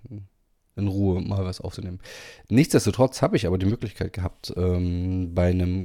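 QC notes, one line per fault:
1.71–1.75 s, damaged data in a compressed stream: a 36 ms glitch breaks into the speech. Corrupted bytes in the encoded stream make the decoder misread or reject those frames and lose sync until it locks onto the next valid frame header.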